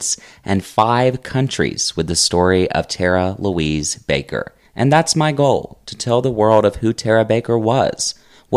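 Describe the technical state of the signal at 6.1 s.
At 6.14 s the speech hits hard clipping: a peak reaches the converter's full-scale limit, with essentially no overdrive, and its top is sliced flat. The waveform shows a squared-off crest, the spectrogram a thin vertical streak of high harmonics, heard as one brief crackle.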